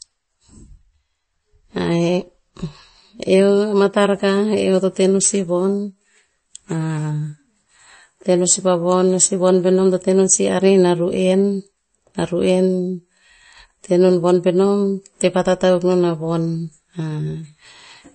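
Speech with MP3 compression damage throughout. Nothing sounds above 8.4 kHz, and the audio is watery and smeared. This likely points to a low bitrate near 32 kbps.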